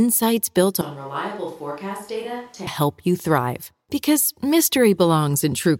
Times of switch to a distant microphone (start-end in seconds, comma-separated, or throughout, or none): 0.81-2.67